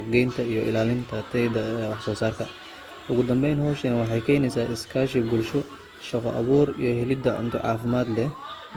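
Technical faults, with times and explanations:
Throughout, generation loss: the speech was likely passed through a lossy codec around five times, consistent with Opus near 48 kbit/s. Each pass requantises on a shifted frame grid, so noise accumulates, leaving a swirly, hollow, smeared sound with blurred attacks.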